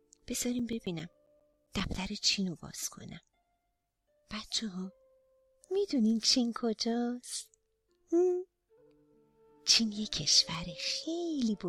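CD scratch ticks from 0.46 to 2.07 s: about a dozen short clicks, each up to around 10 ms, where damaged disc data exceeded error correction on successive rotations.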